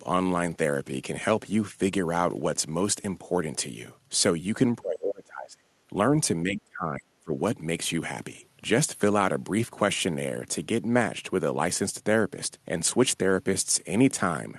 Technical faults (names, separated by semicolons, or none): speech suppressed in double talk